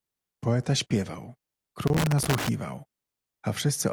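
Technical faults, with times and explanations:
1.87–2.49 s, loose connector crackle. For about 0.6 s the speech breaks into an irregular burst of crackle and scratching. A worn or dirty contact is making and breaking rapidly. Each break chops the signal. Any DC on the line turns the breaks into pops.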